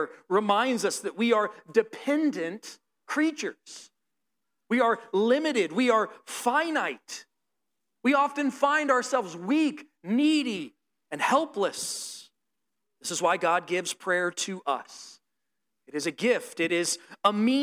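Throughout the clip, crude rate conversion by linear interpolation, fitting a 32 kHz to 48 kHz ratio, leaves unfiltered error around 30 dB below the speech. It is heard as a gritty fizz on loud and sibilant moments. A spectrogram shows faint inharmonic lines that are not part of the voice's harmonic pattern.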